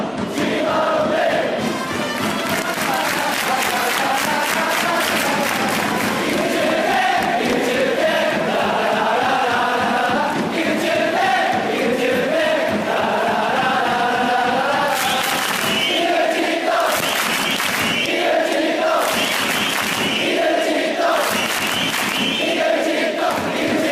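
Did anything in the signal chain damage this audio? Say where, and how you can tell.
Yes. Compressed frames were skipped at 10.15, 15.35 and 23.29 s, a codec-stage fault: whole frames never reached the decoder output, so the audio jumps ahead about 300 ms, then 200 ms twice, fitting runs of 20 ms frames.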